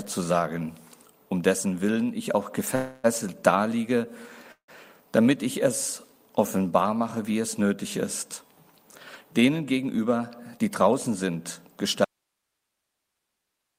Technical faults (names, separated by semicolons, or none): call audio freeze; jitter buffer speed-up; audio dropout to a faint residue